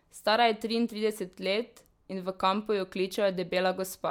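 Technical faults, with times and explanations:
No technical faults detected.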